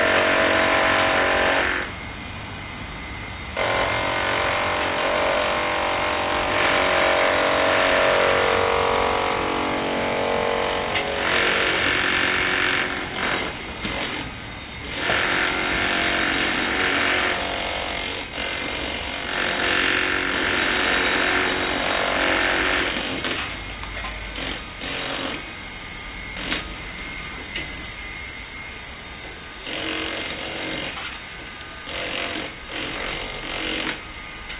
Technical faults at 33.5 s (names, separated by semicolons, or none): none